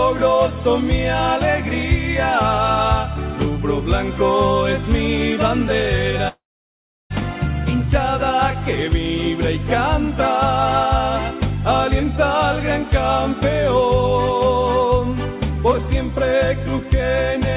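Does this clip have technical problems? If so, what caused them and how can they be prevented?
Yes. From 6.28 to 7.12 s there is a long network dropout, likely caused by lost packets. The last sound is stretched into a fading buzz or hiss, then about 0.7 s of near-silence follows. On the waveform this is a flat gap, and on the spectrogram an empty column (beneath the 4 kHz ceiling of the G.711 call path). The audio then resumes with about 0.82 s missing. A more stable network connection, with forward error correction or redundancy on the link, would prevent this.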